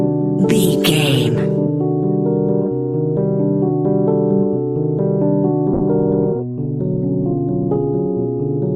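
At 5.74 s a call bitrate drop sets in and lasts to the end of the clip at about 8.76 s. The network's bandwidth estimate fell, so the encoder was forced onto far fewer bits. The audio turns coarse and watery, with the top end dulled. The degradation fits a fall from about 64 kbps to roughly 15 kbps, holding at its lowest for the final 1.71 s without recovering.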